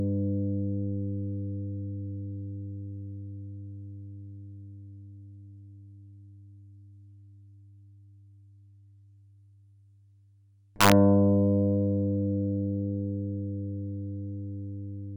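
At 10.81 s, lasting about 0.11 s until 10.92 s, there is integer overflow. The signal was pushed roughly 4 dB past the top of the integer range, and instead of being held at full scale, the peaks wrapped around to the opposite extreme. Each sample that exceeded the limit jumped across the whole range, so this loud passage breaks into hard, violent cracks, far harsher and more abrupt than ordinary clipping.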